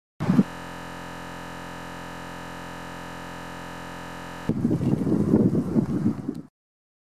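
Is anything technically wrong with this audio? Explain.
Yes. From 0.46 to 4.49 s there is a system hang loop. The system froze while the hardware kept replaying one 23.22 ms buffer, which fits a 1024-sample buffer. The result is a steady 43.1 Hz buzz. Unlike an ordinary stutter, every cycle is exactly identical.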